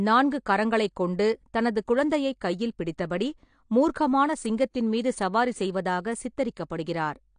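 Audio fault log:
Throughout, AAC compression: there's nothing above 9.8 kHz, so the speech sounds dull, and the sibilants come out smeared and fizzy with a warble. That's likely low-bitrate AAC-LC starving the top band, and the damage fits something around 32 kbps.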